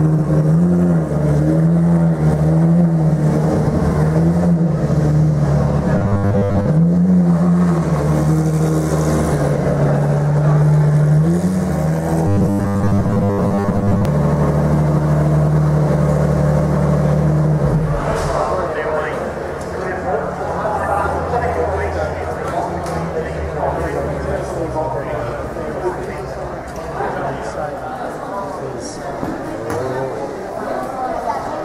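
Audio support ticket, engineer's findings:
Likely audio starvation upstream, last ~10 ms buffer looped in place of most new input. Robotic sound from repeated short buffers, 5.98–6.66 s and 12.27–14.05 s: rigid metallic buzz at 100 Hz.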